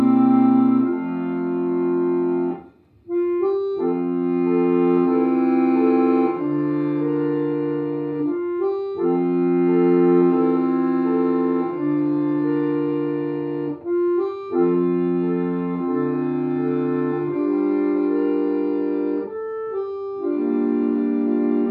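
No technical faults can be heard anywhere in this audio.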